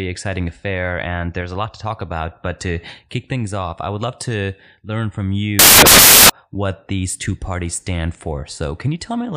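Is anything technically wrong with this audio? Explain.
Yes. From 5.59 to 6.30 s, the speech gives way to samples built from the wrong bytes. For about 0.7 s the bytes that form each sample are assembled wrongly. They may be shifted by one byte, swapped in order, or misaligned. The rapidly changing low bits end up as the dominant part of each value. The result is loud, harsh broadband noise in place of the speech.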